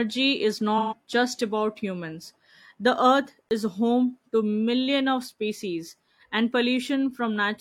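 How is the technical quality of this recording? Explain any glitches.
Two glitches stand out in this speech recording: one patch of AAC frame loss with concealment early on, and one short block of digital silence near the middle.

From 0.78 to 0.94 s there is AAC frame loss with concealment. The decoder lost roughly 128 ms of coded audio, consistent with about three frames, and had to invent the missing stretch by reusing the last good spectrum with randomised phase. The result is a brief smeared, noisy, phasey wash where the speech should be crisp. On a spectrogram the harmonics blur into a flat, grainy smear with no clear pitch lines. The waveform keeps roughly the same level but loses its fine detail.

From 3.49 to 3.51 s there is a 20 ms block of digital silence. A buffer of samples was output as zeros, most plausibly because the audio wasn't delivered in time. The sound drops abruptly to nothing and returns with no fade, and the whole event is heard as a tiny dropout. 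The waveform shows a flat line at silence with vertical steps at both ends. The spectrogram shows a thin vertical dark gap.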